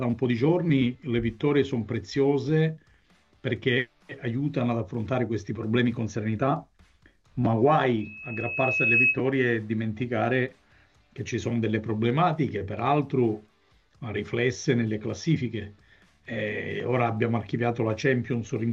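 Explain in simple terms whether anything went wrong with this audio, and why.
Loudspeaker feedback squeal, 8.00 to 9.20 s: the microphone picks up its own speaker, so a 2.6 kHz tone swells rather than holding steady like a whine.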